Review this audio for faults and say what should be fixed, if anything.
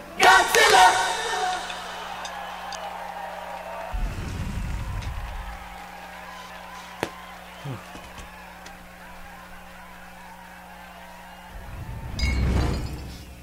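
Chunks out of order occur at 2.25–2.75 s, 6.25–6.75 s, 8.75–9.5 s and 10.75–11.5 s. Each time, a 250 ms block of audio plays one chunk late in the first two spots and two chunks late in the last two. The result is a jumbled stretch with three hard joins. Unlike a dropout, nothing goes missing and no silence appears; the same material is simply reordered. Sequence-numbering each chunk and reordering them in a jitter buffer before playback or writing would prevent it.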